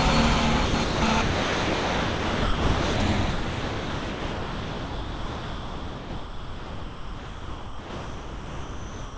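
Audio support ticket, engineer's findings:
Sound dropped by the voice detector. Audio gives way to steady comfort noise at 0.66–0.74 s, 0.84–1.02 s, 1.22–2.96 s, and from 3.30 s to the end. Gaps last 80 ms, 180 ms, 1.74 s, then about 5.9 s. Likely cause: the sender's voice activity detector classed the sound as background and stopped transmitting. The receiver filled in comfort noise. The sound returns only briefly between drops. The call path has no content above 8 kHz, which fits G.722 at 64 kbps.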